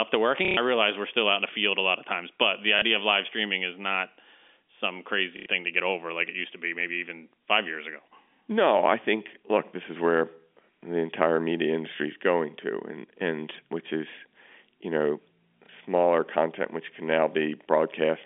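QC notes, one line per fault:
0.45–0.57 s, packet loss with last packet repeated: A 120 ms robotic stutter comes just before "I realize we're still". The receiver keeps replaying the last good packet, and the repeats buzz at about 33 Hz, which fits 30 ms packets.
2.79–2.82 s, packet loss with last packet repeated: A single 30 ms repeat falls between "of times but the" and "of live streaming is". It is a small blip.
5.37–5.46 s, packet loss with last packet repeated: A 90 ms run of repeats makes a short buzzing stutter.
15.66–15.69 s, packet loss with last packet repeated: A single 30 ms repeat makes a small blip between "which is you know" and "content which can". Like every stutter here, it is heard through the narrow telephone band.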